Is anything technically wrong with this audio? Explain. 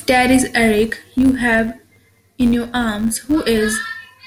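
Yes. A filter restarted on every block runs through the whole of this speech clip, from start to end. The filter drops its internal state at each block boundary and begins again from silence, so every block opens with a small transient. These repeat at about 93.8 Hz, which fits a 512-sample buffer. The result is a steady buzz under the speech that rises and falls with its level.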